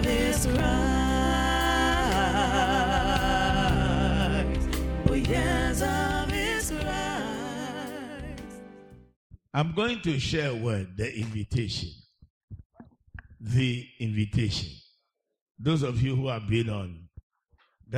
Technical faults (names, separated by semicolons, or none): loud pop